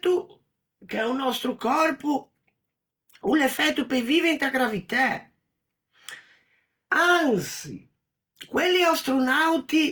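Opus compression runs throughout. The speech sounds plainly rough and grainy but stays full-bandwidth to 20.1 kHz, likely from music-mode encoding noise-filling starved bands at about 24 kbps.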